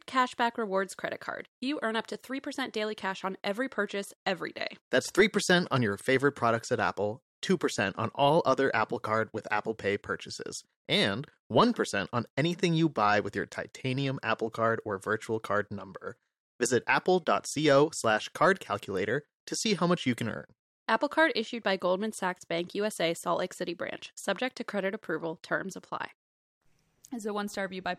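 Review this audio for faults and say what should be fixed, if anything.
Nothing to fix; no faults are audible anywhere in the speech.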